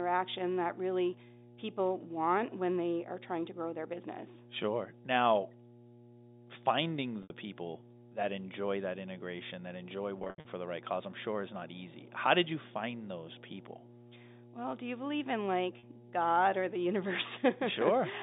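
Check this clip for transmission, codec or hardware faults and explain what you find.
Two faults stand out in this speech, carried over G.711 mu-law telephone coding: a constant mains hum and three bursts of packet loss.

Mains hum runs throughout at 60 Hz. A ground loop or nearby transformer leaks the power line into the signal, producing a steady low drone. It is strong here, roughly 10 dB below the speech, so it sits clearly under every phrase.

Packet loss with pitch repetition occurs at 7.23 to 7.30 s (70 ms lost), at 10.19 to 10.45 s (200 ms lost, scattered over 260 ms, longest run 80 ms), and at 15.79 to 15.83 s (40 ms). The receiver repeats the last pitch period to fill the gaps, and the pattern fits 10 ms packets. This creates a brief buzzy hold, fading toward silence in the longer gaps.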